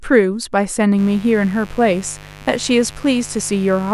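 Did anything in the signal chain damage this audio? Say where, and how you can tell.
Yes. Mains buzz runs from 0.95 s to the end, a raspy 50 Hz buzz well below the speech, from switching spikes entering the analogue wiring.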